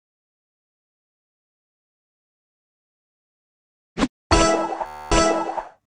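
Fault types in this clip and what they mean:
Bluetooth stutter: from 4.86 to 5.12 s, packets stop arriving in time and the receiver keeps replaying its last short buffer instead of going silent. That slice loops over and over for about 0.25 s, producing a rapid buzzing, machine-gun stutter, which fits around 19 lost packets. When fresh data arrives the sound picks up further along, as though it had kept playing, so the material from that quarter-second is simply missing.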